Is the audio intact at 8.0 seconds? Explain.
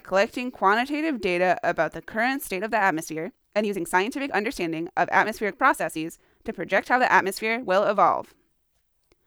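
No. From 2.43 s to the end of the clip, the speech is a time-stretched section. Software likely squeezed it to fit a length, running it 1.42 times faster and dropping short pieces to hold pitch. At 8.0 s the pace sounds rushed, with pitch unchanged.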